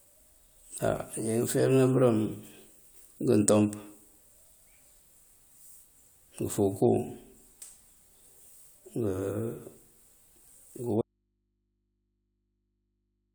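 At 11.02 s the speech cuts out abruptly and never returns, an audio dropout to a faint residue. Only mains hum remains, roughly 50 dB below the signal, which likely points to a lost source feeding a still-live, open input rather than a deliberate pause.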